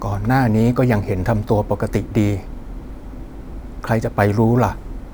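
Throughout, a crude rate conversion has raised the sample rate by a ratio of 1.5, which fits 32 kHz to 48 kHz, by repeating samples without filtering. The repeating error sits roughly 30 dB below the speech, adding a gritty, inharmonic fizz on loud and bright sounds.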